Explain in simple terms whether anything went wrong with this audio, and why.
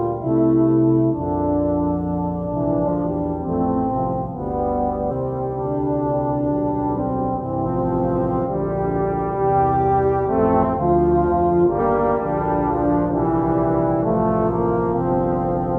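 Chunks of the compressed file went missing or were rejected as damaged, so compressed frames skipped. The audio jumps forward, losing roughly 0.4 to 0.7 s each time, at 2.84, 5.07, 7.62, 10.59 and 11.75 s.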